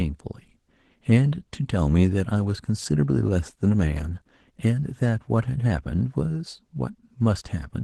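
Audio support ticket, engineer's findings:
Opus voice compression throughout the speech: hoarse, slightly robotic, muffled. Spectrogram shows a split near 8 kHz, with smeared, patchy energy above it where the coarse upper layer sits over SILK prediction. Artefacts are plainly audible, consistent with roughly 16 kbps hybrid mode.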